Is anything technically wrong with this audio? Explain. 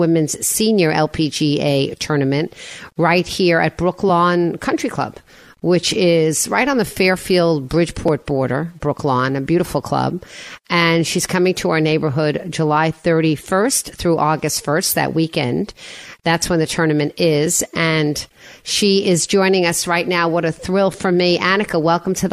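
Yes. At 8.08 s and 20.66 s the sound jumps ahead, losing roughly 10 ms and a few milliseconds; likely a dropped buffer (overrun), unread samples overwritten and the remaining audio butted together.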